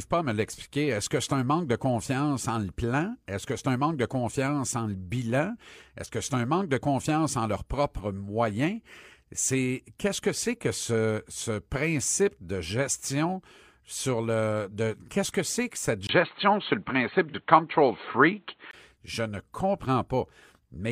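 Right after "que c'est que cette", at about 16.07 s, there's a tiny gap of about 20 ms and then the speech turns dull and boxy, with nothing left above 4.3 kHz, a level shift of a few dB and a faint new noise floor underneath. It stays like that until about 18.73 s, then opens back up. That's most likely an input switched to a poorer device, with the recording jumping to a narrower-band microphone or headset profile and then back.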